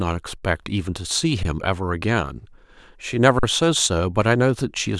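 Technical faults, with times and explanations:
0.38–0.43 s, 1.43 s, 3.39–3.43 s: underrun with held sample. The speech briefly freezes flat, for about 43 ms, 19 ms and 43 ms. The output buffer emptied, and the converter held its last value. The longer gaps fit a 1024-sample buffer. Playback then resumes where it stopped, so each gap ends softly.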